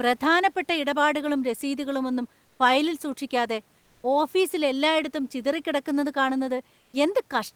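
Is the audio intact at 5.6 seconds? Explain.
Yes, at 5.6 seconds the speech is intact, with only the room's own background noise sitting about 40 dB below it.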